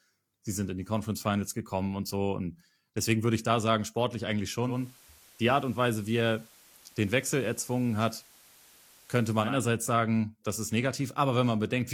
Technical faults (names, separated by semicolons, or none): digital radio blending to analogue